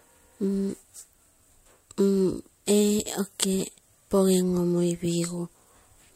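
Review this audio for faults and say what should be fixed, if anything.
Nothing needs fixing, as the speech signal shows no technical faults anywhere in the recording.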